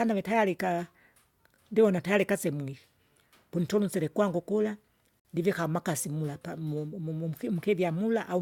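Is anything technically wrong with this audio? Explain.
Yes. There is a gap at a join of encoded pieces from 5.20 to 5.25 s, between "pununtusile kula" and "ndivika amakasi mula pamu". The speech drops into a silence of about 53 ms with smeared edges, then resumes exactly where it stopped. This happens when audio is encoded in separate segments and spliced without trimming, so the encoder's start-up delay and final-frame padding both remain as dead air inside continuous speech.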